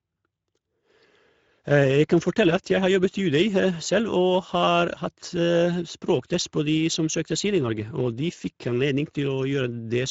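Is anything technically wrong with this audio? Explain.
Yes. Throughout, the speech carries Speex codec damage: its starved CELP excitation sounds noisy and hoarse, and the band above 4 kHz becomes hissy fill, ending near 7.7 kHz. A mid-setting around 17 kbps fits this, unlike a clean low-pass.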